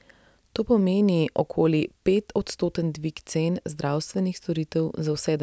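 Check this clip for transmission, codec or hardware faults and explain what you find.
No transmission, codec or hardware faults can be heard anywhere in the recording; the speech signal remains continuous and stable throughout.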